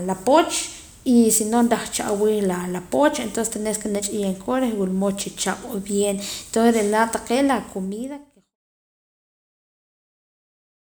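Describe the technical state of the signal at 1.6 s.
At 1.6 s the speech signal is intact, with no audible fault at that moment.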